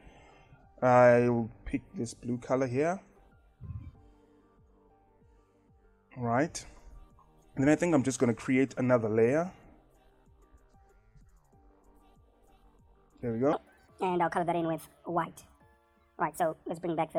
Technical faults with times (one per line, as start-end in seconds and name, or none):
13.53-17.18 section at the wrong speed